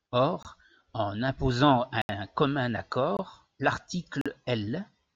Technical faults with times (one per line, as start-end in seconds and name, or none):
0.43-0.45 block of digital silence
2.02-2.09 block of digital silence
3.17-3.19 block of digital silence
4.21-4.26 block of digital silence